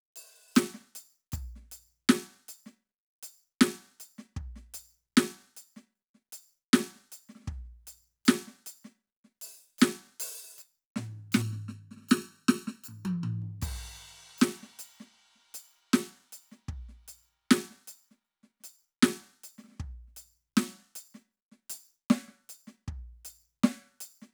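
From 11.42 to 13.42 s the music turns hollow and phasey. This is channel delay causing comb filtering. One channel arrives late by under a millisecond, and the mono sum cancels evenly spaced frequencies. The first notch sits near 700 Hz.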